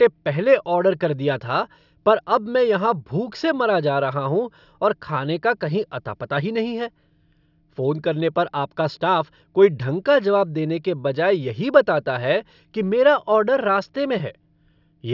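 Nothing goes wrong anywhere in this recording, so there's no fault to walk through in time order.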